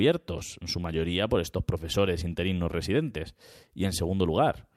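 No technical faults can be heard anywhere in the speech, with the signal staying steady and intact throughout.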